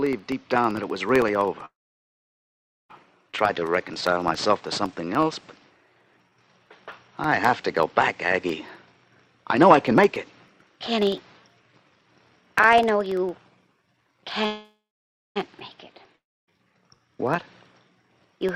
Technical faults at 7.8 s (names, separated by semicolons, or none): periodic USB or driver dropouts; jitter buffer slow-down